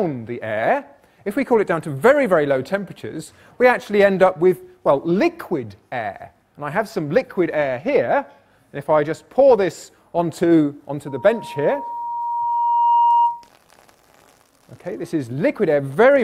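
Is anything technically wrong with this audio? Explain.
Yes. From 11.07 to 13.49 s a steady 944 Hz tone swells over about two seconds until it sits a few decibels above the sound. This is loudspeaker feedback squeal: the microphone picks up its own loudspeaker, and at 944 Hz the loop gain exceeds one, so the tone keeps growing.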